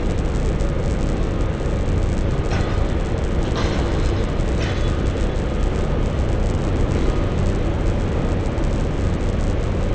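Throughout, a resampler restarted on every block leaves a 100 Hz buzz. Each 10 ms block of the 44.1 to 16 kHz conversion was converted on its own, so every block edge carries a small error. Unlike mains hum, the buzz vanishes whenever the sound stops.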